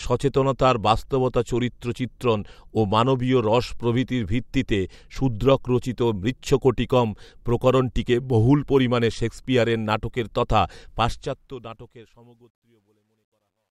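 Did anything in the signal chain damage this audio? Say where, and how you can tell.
Yes. The fade-out at the end has truncation distortion, which points to a sample-format conversion or gain stage. Right after "পরিমানে শেক্সপিয়ারের নাটকের তথা", the level starts falling from 10.88 s and the tail goes gritty. From 12.2 s to the end at 13.71 s it is at its worst. As the gain shrinks, the samples get chopped to a handful of undithered steps, which fits a 12-bit path, so the quiet end turns into square-ish grit.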